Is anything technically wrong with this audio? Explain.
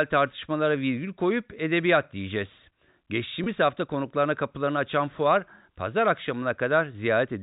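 Yes. From 3.44 to 3.46 s there is packet loss with pitch repetition. About 20 ms of speech, consistent with one lost packet, was concealed by repeating the last pitch period, giving a brief held, buzzy blip over the telephone-band G.711 signal.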